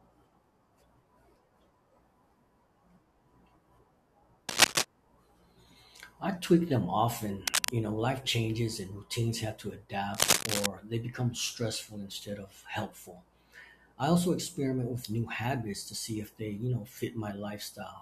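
A speech recording with three brief bursts of harsh, uneven scratching and rustling laid over the sound, at 4.49 to 4.85 s, 7.47 to 7.70 s and 10.15 to 10.67 s. Each burst sits roughly a few decibels above the speech. This is cable scratch noise, most likely from a worn cable, connector or control being moved, its contact resistance fluctuating rapidly and injecting dense noise into the signal.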